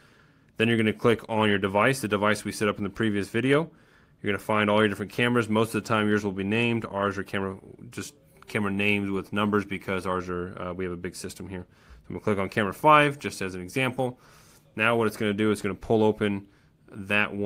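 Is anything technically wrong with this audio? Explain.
No, nothing is technically wrong with this audio.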